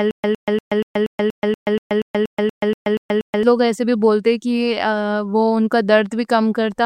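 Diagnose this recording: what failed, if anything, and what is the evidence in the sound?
The fault is a stutter with silent gaps, present from the very start until 3.43 s, where normal speech resumes on "لوگ ایسے بھی بولتے". A burst of about 109 ms repeats 14 times at a steady 238.5 ms period, each followed by about 129 ms of digital silence. The likely cause is a stalled playback or stream buffer replaying its last fragment on every retry. On a waveform or spectrogram this shows as identical blocks alternating with flat, empty gaps, and the audio from those gaps is lost.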